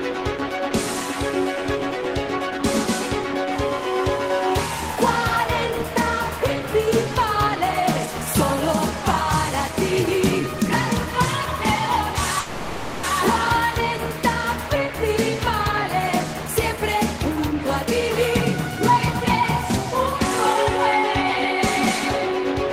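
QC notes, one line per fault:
12.39–13.05 s, call audio freeze: the sound stalls for about 0.64 s, with the last moment stretched into a fading buzz or hiss rather than dead silence. This likely comes from delayed packets emptying the jitter buffer; playback then resumes where it stopped, inserting a gap without losing audio.
16.34–17.86 s, jitter buffer speed-up: the audio runs about 10% fast at unchanged pitch, sounding hurried. The receiver trims short pitch-period slices in quick succession to drain excess buffered audio, removing roughly 150 ms in total.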